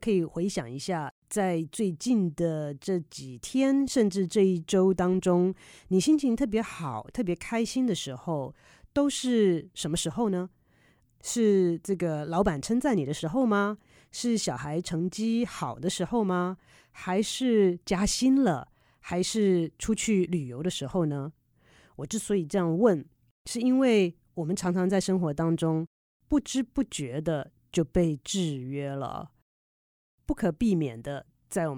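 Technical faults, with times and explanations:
No technical faults can be heard in this speech recording. There is nothing in the audio that needs a time or an explanation.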